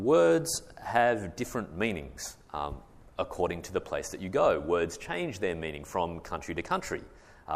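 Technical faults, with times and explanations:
No technical faults can be heard anywhere in the audio. There is nothing to list with a time or an explanation.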